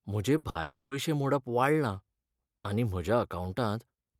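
Speech with two bursts of packet loss in quick succession, at 0.37 to 0.46 s and 0.49 to 0.58 s. In each, the receiver extends the last sound for about 60 ms as a decaying buzz or hiss, then resumes with 60 ms of audio skipped. A long network dropout is the likely cause of the next fault, from 0.61 to 0.94 s. The concealment holds the preceding sound for about 300 ms while fading it, leaves roughly 10 ms of silence, and then restarts with 300 ms of speech lost.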